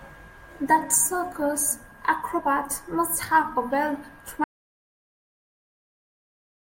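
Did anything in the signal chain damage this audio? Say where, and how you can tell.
Yes. The input path failed partway through, likely a disconnected device, a broken link or an accidental mute ahead of the recorder, which then kept writing silence. This is an audio dropout to silence: the speech cuts off abruptly at 4.44 s, and from there to the end of the clip there is silence, with no room tone or noise floor. A natural pause would keep that background, so the input itself was lost.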